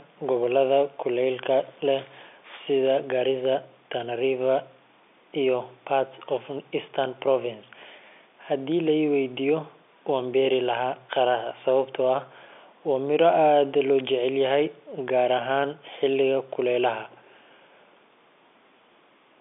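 The speech shows no technical faults, with its sound confined to the ordinary telephone band of roughly 300 Hz to 3.6 kHz that fits G.711 A-law coding at 64 kbps.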